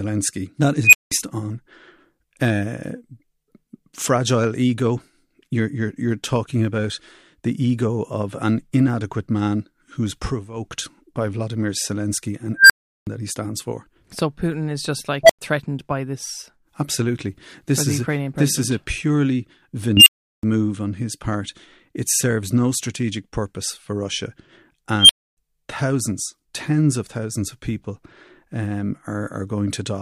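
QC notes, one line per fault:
0.84–1.12 s, unstable filter: a tone around 3 kHz swells to clipping in 93 ms, then 186 ms of silence. A recursive filter with bad coefficients runs away, overflows and resets. Unlike feedback howl, the squeal ends in a sudden dropout instead of being pulled back down.
12.57–13.07 s, unstable filter: a tone around 1.5 kHz builds over 128 ms, then 372 ms of silence before "that he stands for".
15.23–15.39 s, unstable filter: a tone around 700 Hz between "is just" and "threatened by this", with a 61 ms build-up and 93 ms of silence.
19.97–20.43 s, unstable filter: a tone around 3 kHz, with a 92 ms build-up and 372 ms of silence.
24.99–25.37 s, unstable filter: a tone around 3 kHz, with a 101 ms build-up and 279 ms of silence before "thousands tens of thousands".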